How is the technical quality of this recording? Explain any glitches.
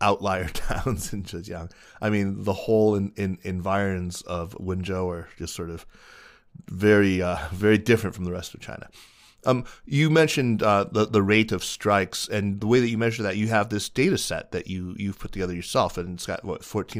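Nothing in the recording stands out as a glitch, so there's nothing here that needs explaining.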